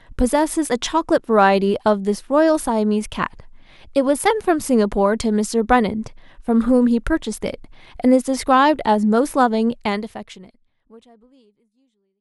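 Nothing stood out on listening to this speech clip, which simply eases out with a smooth fade over its final few seconds.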